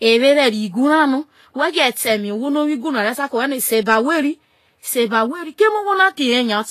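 Speech, and the whole way through it carries plainly audible damage of the kind that fits Vorbis compression at a low bitrate, likely something around 32 kbps. Nothing gets through above about 14.2 kHz, and the treble that is left has gone hissy and grainy because the fine detail up there has been quantised so coarsely it turns into noise of similar energy. Consonant attacks sound smeared, and voiced tones pick up a rough edge.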